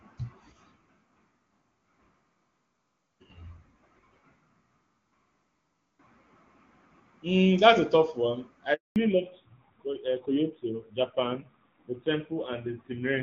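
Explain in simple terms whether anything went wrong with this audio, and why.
Two things go wrong, both right around the 8.7-second mark. First there's a handover gap from 8.74 to 8.96 s. The phone was switching the call from one network to another, and for about 220 milliseconds nothing came through at all. The sound drops out almost instantly and sits in dead silence until the new connection picks up, so whatever was said in that moment is simply gone and can't be recovered.

Right after that, at 8.96 s, the call falls back to narrowband and stays that way to the end. Up to the handover you're hearing HD Voice, which sounds clear and full. After the switch, the call is carried by an older, lower-quality phone codec that throws away everything above 4 kHz. That's why the voice suddenly sounds duller, more muffled and a bit rougher, like an old-fashioned landline call.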